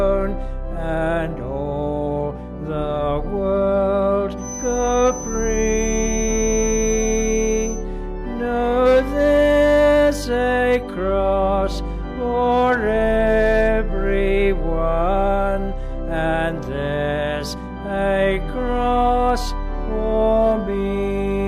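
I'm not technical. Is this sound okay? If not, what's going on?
No. From about 4.36 to 7.86 seconds there is a feedback whistle: a thin, very high tone, around 6 kHz, sitting quietly underneath the main sound and slowly swelling and fading in loudness. The likely cause is a loudspeaker's output reaching a microphone and looping round, held just at the edge of feedback. Unlike full feedback, it never swells into a piercing squeal, and unlike electrical hum, it is high-pitched rather than a low drone.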